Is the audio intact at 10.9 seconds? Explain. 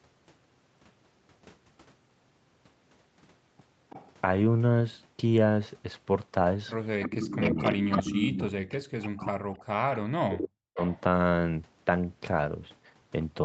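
No. From 10.88 to 11.0 s there is an echo leak: a faint, delayed copy of the talker returns about 0.33 s late and roughly 25 dB below the speech. This is likely a loudspeaker echo that the far end's echo canceller did not fully remove before sending it back. Just before that, from 10.38 to 10.81 s, the speech is suppressed in double talk, dipping by up to about 40 dB over roughly 0.4 s. The likely cause is the echo canceller turning down the talker along with the echo while both sides spoke at once.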